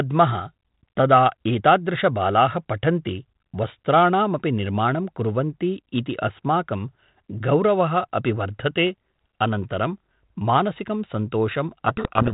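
At 11.88 s the speech turns to harsh distortion. It stays that way to the end of the clip, at 12.33 s. This is a codec payload misread. The G.726 code words arrive with their bits in the wrong order, so the decoder builds each sample difference from misplaced bits. Its adaptive prediction then follows garbage. The speech is buried under rasping noise. Before this point, the 32 kbit/s G.726 path gives band-limited telephone sound with nothing above 4 kHz.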